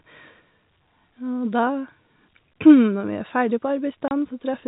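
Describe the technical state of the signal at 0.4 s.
At 0.4 s the speech is intact, carried through G.711 telephone coding with its usual narrow band that stops short of 4 kHz.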